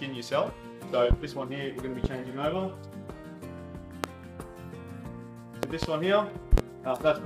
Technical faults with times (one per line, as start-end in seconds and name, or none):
1.11-1.15 loud pop
2.04-2.08 loud pop
4.04-4.08 loud pop
5.63-5.86 loud pop
6.53-6.61 loud pop